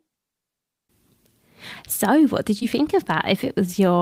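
At 2.59 to 2.63 s, just after "what did", there is a short concealed packet loss. About 20 ms of audio arrived too late. The decoder extended the preceding sound to cover it, then crossfaded back. This is heard as a brief smeared wobble.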